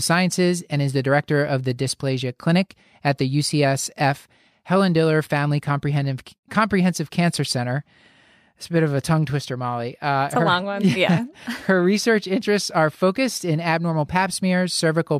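Listening to the speech, nothing stood out as a technical fault at any point.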